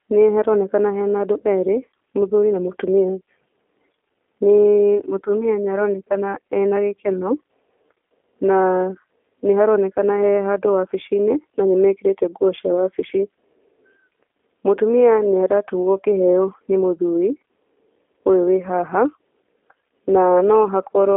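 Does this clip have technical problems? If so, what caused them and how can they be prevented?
Yes, the whole clip carries G.729 codec damage: nothing above 3.6 kHz, a rough, synthetic buzz from pulse-modelled excitation, consistent with 8 kbit/s VoIP. Use a wideband codec like Opus instead.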